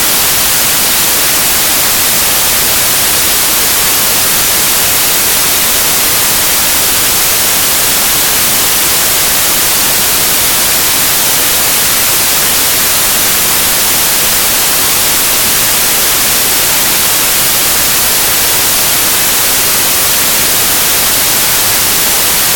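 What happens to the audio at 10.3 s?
At 10.3 s the audio is loud, harsh broadband noise, as it is throughout. These are samples built from the wrong bytes: each value is assembled with its bytes misordered or misaligned, so the rapidly changing low bits dominate.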